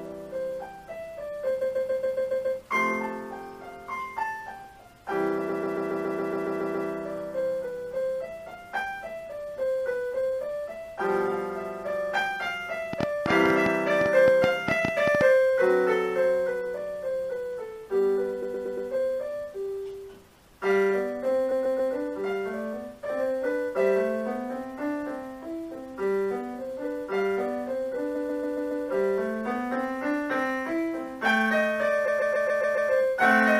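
The audio stutters six times from repeated frames, where a short block of compressed frames is played over and over before the sound moves on. The events fall at 1.60–2.58 s, 5.48–6.88 s, 18.42–18.88 s, 21.50–21.92 s, 28.14–28.84 s and 32.07–32.90 s. Each repeats a block of about 139 ms, except at 18.42 s, where the block is 116 ms. That block is replayed between three and ten extra times, adding from 0.42 s to 1.39 s of duration per event. A waveform shows identical segments tiled end to end, and a spectrogram shows the same pattern stamped repeatedly. From 12.93 to 15.22 s, a train of clicks ticks over the sound, around 20 sharp pops at roughly eight per second with uneven spacing. They peak at about 15 dB above the programme level. On a waveform they appear as narrow spikes standing clear of the surrounding signal. On a spectrogram they are thin full-height vertical lines. The likely cause is electrical interference or a faulty connection or power supply injecting pulses.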